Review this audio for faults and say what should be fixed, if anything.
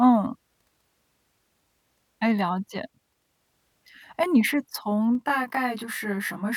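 Channel delay (comb filtering) runs from 5.15 s to 6.57 s, at the end of the speech. One channel arrives around 20 ms behind the other, and when the pair is folded to mono, the shared content cancels at evenly spaced frequencies, starting near 30 Hz and repeating roughly every 50 Hz. That dense row of fixed notches gives the closing section a rough, slightly doubled sound. Realign the channels or check mono compatibility before summing so neither side lags.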